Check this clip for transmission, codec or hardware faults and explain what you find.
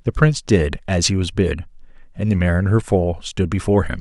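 Nothing here points to trouble in the transmission, the codec or the hardware, so there's nothing to flag in this bit of speech.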